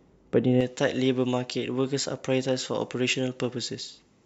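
From 0.61 s to the end, the speech has pre-emphasis left on: the treble was lifted before storage or transmission, and the complementary de-emphasis on playback never happened. The tilt fits a J.17 curve, leaving 10 kHz about 11 dB hotter relative to 1 kHz. As a result, the speech turns thin and glassy, with sibilants hissing forward and the lower body of the sound receding behind an exaggerated, brittle top end.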